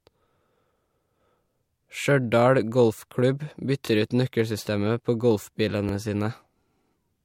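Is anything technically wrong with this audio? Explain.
Yes. The speech has overlapping chunks at two points. From 3.87 to 3.89 s, just before "ut nøkkelsystemet på", and again from 5.89 to 5.92 s, a 23 ms slice plays twice. The 2.0 s spacing shows the audio was handled in 2 s chunks, each starting 23 ms before the previous one ended. Each join is heard as a brief click or stutter. On a waveform the same short stretch appears twice in a row. A spectrogram shows a thin vertical seam with a tiny repeated patch.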